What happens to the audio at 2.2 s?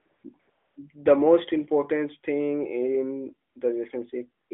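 Nothing goes wrong at 2.2 s: the speech carries on intact through that moment, with only the narrow 200 Hz to 3.5 kHz band and light coding of the AMR narrowband mobile codec path it travels through.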